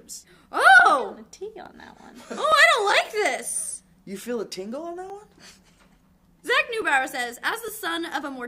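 A regular click recurs every 0.86 s from 0.80 s to 7.68 s, about ten in all. These are likely clock drift buffer slips: two clocks differing by roughly a thousand parts per million, so the buffer repeatedly drops or repeats a block of around thirty samples.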